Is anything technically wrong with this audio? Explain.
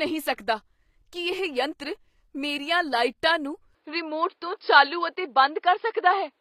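Yes, three problems can be heard in this speech clip.

Throughout, plainly audible codec damage with nothing above 14.9 kHz is likely HE-AAC compression, which fits a bitrate around 24 kbps. The treble is rebuilt by copying lower bands upward, so s sounds turn gritty or metallic rather than simply dull, as a plain low-pass would leave them.

From 0.34 to 0.38 s there is pre-echo: a hiss about 43 ms long smears in before a sharp attack, because the codec spread its noise across the quiet moment ahead of it. Unlike a click, it precedes the onset.

From 3.75 s to the end, the sound narrows to nothing above 5.2 kHz, with no gap at the change, a level shift of around 5 dB and new background noise roughly 45 dB below the signal. The likely cause is an input switched to a poorer device, which explains why the tone and noise floor change together at one point rather than the sound gradually drifting duller.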